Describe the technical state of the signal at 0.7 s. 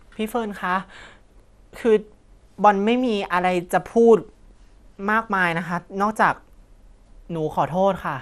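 At 0.7 s the speech sounds dull, with a gurgling, grainy edge. Nothing reaches above 14.4 kHz. The cause is likely MP2 compression, which fits a low rate near 80 kbps. Starved sub-bands drop out or get coarsely quantised. The damage runs throughout the clip.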